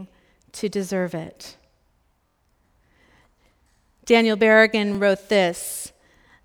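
At 2.28 to 2.37 s, a repeated buffer plays one 23 ms piece four extra times. This gives a brief buzzy stutter. The block length fits a 1024-sample buffer. At 4.95 to 4.97 s, one more repeat makes a single hard join. New audio arrived late, so the last buffer was replayed. Nothing is lost.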